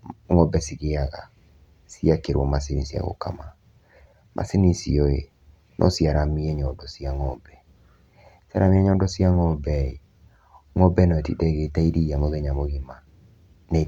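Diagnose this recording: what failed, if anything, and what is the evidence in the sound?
Listening closely to the speech, nothing stood out at any stage of the recording chain.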